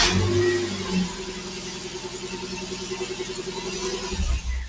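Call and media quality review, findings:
Noise suppressor applied to music or sounds, throughout. Level pumps and flutters, swinging by about 10 dB. Held sound and tails sink; attacks pass. Speech-tuned suppressor reads steady content as noise and ducks it. Call path audible too: nothing above 8 kHz, consistent with wideband G.722.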